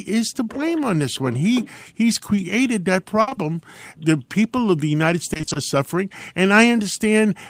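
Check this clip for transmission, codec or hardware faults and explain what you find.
Packet loss affects the speech in three places, all of it concealed by the receiver rather than left as silence.

Short concealed packet loss occurs at 2.35 to 2.39 s, and again in two back-to-back spots at 3.29 to 3.33 s and 3.33 to 3.37 s. Each time about 20 ms of audio failed to arrive, and the decoder patched the hole by carrying the preceding sound forward before crossfading into the real signal. Each is a brief smear or wobble. What separates these from a burst is brevity: the patch is too short to fade audibly.

A burst of packet loss runs from 3.21 to 3.29 s, where roughly 60 ms went missing in one stretch. With no fresh data for that long, the concealment keeps extending the last sound while lowering its level, so a voiced segment turns into a held buzz and unvoiced sound into a thinning hiss. 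The speech then picks up past the gap, with that part simply absent. The audible fade and the missing chunk distinguish it from the isolated short losses.

Repeated packet loss (robotic sound) spans 5.33 to 5.57 s, with six separate gaps of at most 20 ms each, totalling about 120 ms, so half of that quarter-second is synthesised fill. Because each patch is followed almost at once by another, the concealment never settles, and the sound turns choppy. None of the individual gaps is long. The robotic texture comes from how densely they recur, which sets this apart from a single burst.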